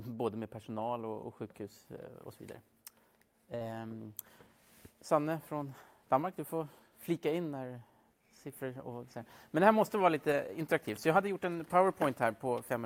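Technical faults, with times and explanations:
3.55 to 3.62 s, burst of packet loss: a short run of packets went missing or arrived too late to play. For about 50 ms the receiver papers over the hole by stretching the last bit of sound it had and fading it down, which is that brief smeared, dying tail you hear. Then the audio jumps ahead and carries on, with roughly 60 ms of the original simply gone.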